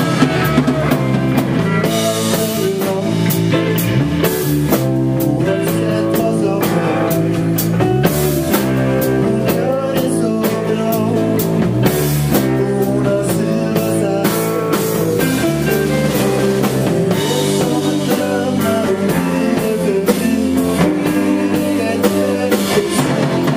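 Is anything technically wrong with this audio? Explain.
No, nothing stood out as technically wrong when listening to this audio.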